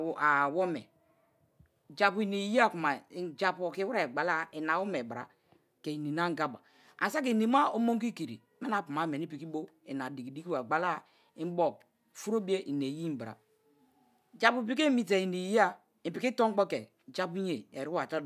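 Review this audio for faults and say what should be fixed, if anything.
No faults found in the speech, so nothing needs fixing.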